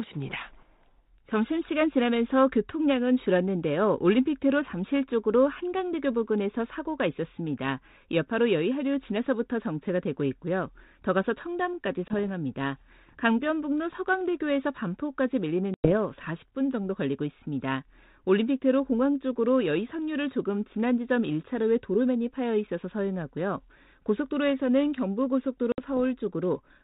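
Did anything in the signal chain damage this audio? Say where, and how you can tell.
Yes. The damage is in the network stage: packet loss on an ADPCM call. Hard-edged silent holes open at 12.08 s, 15.74 s and 25.72 s. They last 20, 100 and 60 ms. The longest gap fits about five lost packets. After each hole the speech returns with brief, slight distortion. The G.726 decoder's predictor and step size have drifted from the sender's. They resync within about a tenth of a second, by 12.15, 15.94 and 25.83 s.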